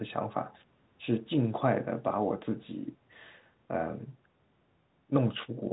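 Listening closely to this telephone-band speech, which stops just below 3.9 kHz as an ordinary phone line would, nothing stood out.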